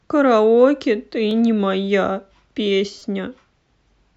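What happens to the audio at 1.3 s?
A brief click at 1.31 s: a repeated buffer, where late audio made the device replay the last 5 ms piece once, with a hard join.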